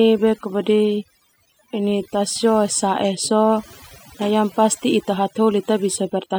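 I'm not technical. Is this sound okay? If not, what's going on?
No. Overdone noise removal affects the whole clip: a noise reduction tool was set too strong, so it shut off frequency bands it mistook for background noise, taking quiet parts of the speech too. The background drops and breaks up into twinkling specks.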